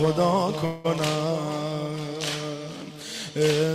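At 0.65 s a call audio freeze begins. For about 190 ms, to 0.86 s, the last sound is stretched into a fading buzz, likely because delayed packets left the jitter buffer empty. On a spectrogram it shows as a smeared, flat band without a silent gap, then the audio resumes late.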